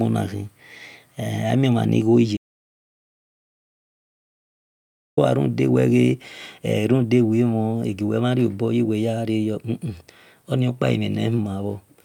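An audio dropout to silence runs from 2.37 s to 5.17 s in this speech clip, about 2.8 s where the signal falls to silence with no room tone beneath it. The speech stops abruptly and resumes mid-flow, and whatever was said in that stretch is simply missing. Dead silence rather than quiet noise points to the input itself vanishing, likely a disconnected device, dropped link or accidental mute, while the recorder kept writing.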